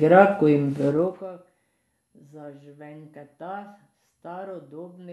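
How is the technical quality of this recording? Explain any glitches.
One glitch stands out in this speech recording: zipper noise between 0.89 and 1.32 s. A gain drop of roughly 25 dB was applied in 1 dB increments, around fifty times a second, with no smoothing between steps, which points to the level being updated once per buffer. Each jump leaves a tiny discontinuity, so a fast ticking, zipping texture rides on the speech while the level falls.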